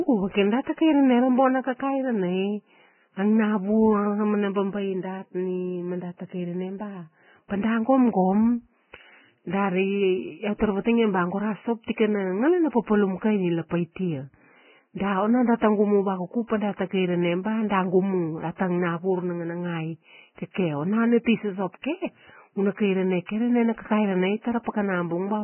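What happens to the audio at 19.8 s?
At 19.8 s the speech sounds muffled and grainy, with nothing above about 3 kHz, a hissy, roughened texture where the upper detail should be, and softened consonant attacks. The damage is heavy and runs through the whole clip. It is likely Vorbis compression at a very low bitrate, roughly 9 kbps. At that rate the encoder drops everything past 3 kHz and quantises what remains so coarsely that fine spectral detail is replaced by noise of similar energy.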